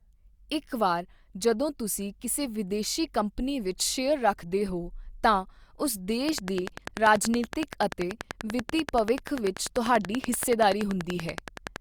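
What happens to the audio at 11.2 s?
At 11.2 s the audio is inside a train of clicks running from 6.29 to 11.77 s, starting after "ਰੱਖਦੇ ਹੋ ਤਾਂ ਉਸ". Regular pulses, likely from interference or a faulty connection, tick at 10.4 per second, well above the speech. A spectrogram shows evenly spaced thin vertical broadband lines, and the waveform shows matching sharp spikes.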